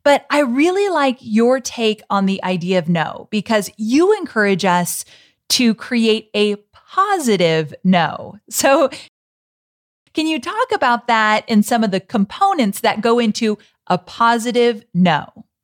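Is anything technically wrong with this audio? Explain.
Yes. At 9.08 s this speech clip hits a rebuffering stall: the player runs dry of downloaded audio and simply waits. You get about a second of dead silence, until 10.07 s, then it picks up cleanly with "can you talk about". Nothing's skipped, just roughly a second of time added.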